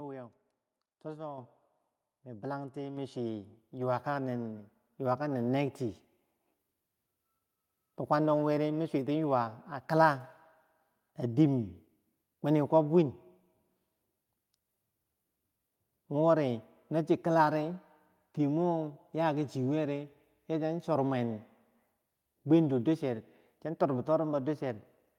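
At 1.38 s the microphone volume steps up by about 6 dB, then again by about 4 dB at 2.97 s, just after "mi bilanti". Each time the input gain jumps abruptly, lifting speech and background noise together in one step.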